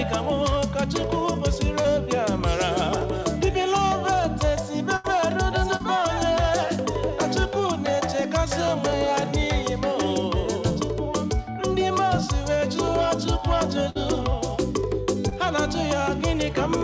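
Short concealed packet loss at 1.82 to 1.86 s: about 20 ms of the stream failed to reach the decoder in time, and the receiver bridged the hole by extending the preceding sound for roughly 23 ms before easing back into the real signal. It comes through as a quick smear or wobble. The same repair recurs at 5.76 to 5.82 s, covering a 40 ms gap, and at 15.29 to 15.34 s, covering 20 ms.

Burst of packet loss at 4.96 to 5.06 s: about 80 ms of consecutive audio arrived too late to play. The decoder kept the last sound going for around 78 ms and let it fade, so a held buzz or thinning hiss stands in until playback picks up further along with that stretch gone. A second burst at 13.90 to 13.97 s drops about 60 ms, masked by roughly 52 ms of fading continuation. Throughout, the call path's band limit at 8 kHz, which fits a wideband codec such as G.722, is audible as missing top end.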